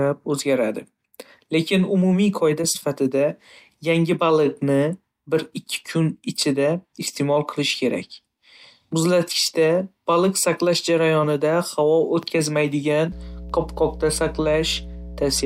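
Mains hum enters at 13.12 s and holds steady until the speech clip finishes at 15.46 s. A 60 Hz power-line tone is leaking into the signal path, most plausibly through a ground loop or a transformer sitting close to the cabling, so mains current couples straight into the audio. It lands as a constant low drone with some low harmonics above it, sitting fairly high, roughly 15 dB below the speech.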